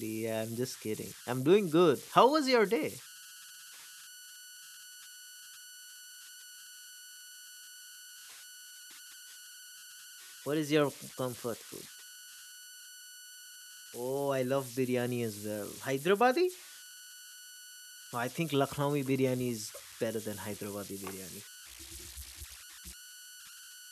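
Converter idle tones run through the whole speech recording: an undithered delta-sigma converter settles into repeating bit patterns at low levels, producing a whistle of around 1.5 kHz in pauses and grainy noise under quiet passages, at about 18 dB below the signal.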